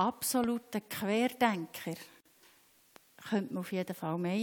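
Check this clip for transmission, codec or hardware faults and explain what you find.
There are two kinds of fault here, a pair of loud pops and one gap at a join.

Loud pops hit at 0.44 to 0.46 s, peaking roughly 10 dB over the sound, and at 2.96 to 2.98 s, about 5 dB over. They're sharp single thumps sitting on top while the sound carries on underneath, likely a voltage spike from a switch, plug or static.

A gap at a join of encoded pieces opens at 2.21 to 2.25 s, a 49.5 ms gap with smeared edges. Two separately encoded pieces were spliced without trimming the encoder's start delay and end padding, so the sound stops briefly and then resumes where it left off.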